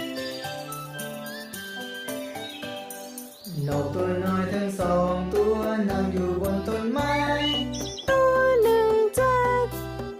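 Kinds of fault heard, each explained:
Nothing wrong stands out here: the audio carries on steadily with no dropouts, glitches or other problems worth pointing to.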